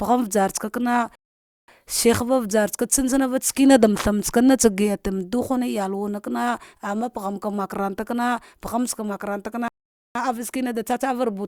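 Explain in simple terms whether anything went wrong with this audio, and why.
Twice, the player ran out of downloaded audio and had to wait for more to arrive, a rebuffering stall. Each time the speech simply stops and falls silent, then picks up exactly where it left off, with nothing skipped. The first pause runs from 1.15 to 1.68 s, adding about half a second, and the second from 9.68 to 10.15 s, adding just under half a second. The only harm is the added waiting time.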